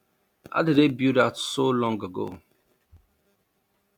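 Speech, with processor overload crackle from 2.28 to 3.18 s, just after "build that so long": around thirty very short buffers, roughly 1.5 ms each, were skipped, causing gritty tearing.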